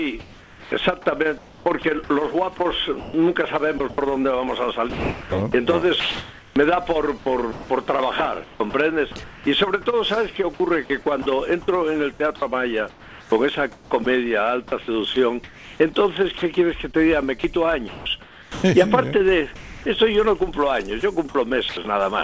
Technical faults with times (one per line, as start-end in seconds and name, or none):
0.20-3.98 sound chopped by the voice detector
4.90-9.46 sound chopped by the voice detector
11.22-11.26 sound dropped by the voice detector
12.36-14.06 sound chopped by the voice detector
15.14-18.64 sound chopped by the voice detector
19.56-21.77 sound chopped by the voice detector